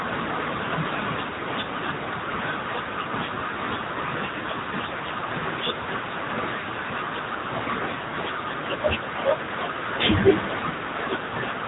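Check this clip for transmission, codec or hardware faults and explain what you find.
One fault is present, running for the whole clip: the speech has passed through the AMR narrowband mobile codec. This codec samples at 8 kHz and rebuilds each 20 ms frame from a vocal-tract filter excited by a few pulses per 5 ms subframe, so nothing survives above about 3.8 kHz. The damage is plainly audible: the speech sounds boxed-in and buzzy, with a synthetic edge that fits one of the lower AMR-NB modes, near 8 kbps.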